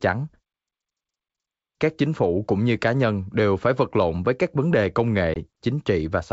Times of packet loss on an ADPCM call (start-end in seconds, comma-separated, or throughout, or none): 5.34-5.37